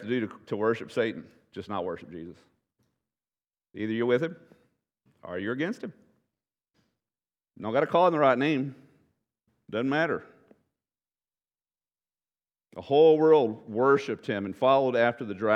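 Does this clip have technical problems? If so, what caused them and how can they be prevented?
No, nothing technical stands out here: the speech comes through without any faults to point to, so there's nothing that needs preventing.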